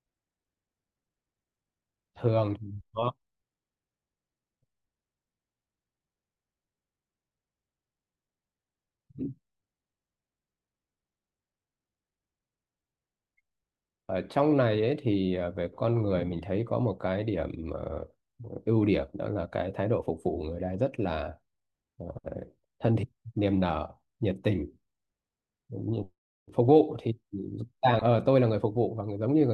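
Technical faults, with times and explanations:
27.99–28.02 s, DAB burbling: a few watery blips over the speech. A few bit errors, at a rate under a tenth of a percent, got past error correction and put short blips of noise in single sub-bands, across about five frames. Unlike a dropout, the sound never stops.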